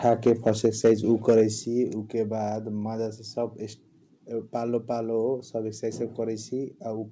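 From 0.05 to 0.92 s the loudest peaks of the speech are flattened and crackle harshly, driving about 4 dB past full scale. This is microphone overload, likely from an input volume set too high for the converter. At 0.66 s the whole signal, background included, drops abruptly by about 2 dB, a microphone volume stepped down, likely the call software's gain control reacting to that clipping. A shorter burst of overload follows from 1.28 to 1.41 s, about 3 dB over, with a small share of samples cut flat. At 1.65 s a second, larger step of about 6 dB lowers the level again. Throughout, the G.722 call path leaves nothing above 8 kHz.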